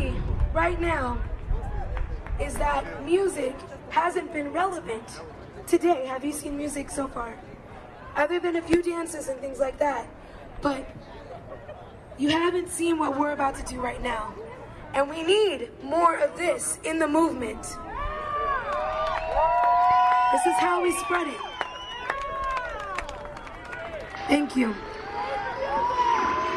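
Nothing is technically wrong with the audio, so there are no times or causes to report.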